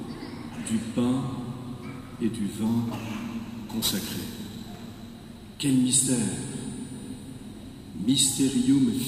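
From 2.66 to 5.14 s, periodic clock jitter adds a rough, metallic edge as interference at around 4 kHz wobbles the converter's sampling clock, placing sidebands at that spacing around each component. Unlike random jitter's diffuse noise floor, these sidebands are tonal and vanish in silence.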